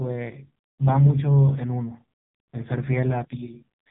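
AMR narrowband mobile codec damage runs through the whole clip. The speech has passed through the AMR-NB phone codec, which samples at 8 kHz and rebuilds the voice from a vocal-tract model excited by a few pulses per 5 ms subframe. Nothing above 3.8 kHz survives, so sibilants are dull and boxed-in. The damage is heavy, with a buzzy, synthetic tone that fits one of the codec's lowest modes, around 5 kbps.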